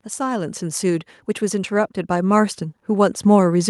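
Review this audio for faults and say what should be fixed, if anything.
Automatic gain rising from 0.16 to 3.67 s: the AGC decided the input was too quiet and slowly pushed it up about 10 dB, so voice and background swell together. Set a fixed input level and disable or slow the AGC before recording.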